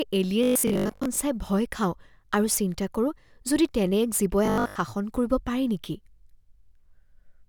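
From 0.44 to 1.18 s and again from 4.46 to 4.78 s, the speech goes robotic, a stiff metallic buzz at 50 Hz. That's likely short buffers being repeated, about 20 ms each, filling roughly half the first stretch and most of the second.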